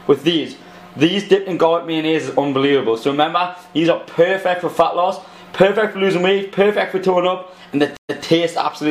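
From 7.97 s to 8.23 s the sound cuts out for 123 ms, then resumes 139 ms earlier than where it stopped, replaying a brief stretch. This is a stream reconnect: the connection dropped, the player started a fresh decoder, and the server resent recent audio.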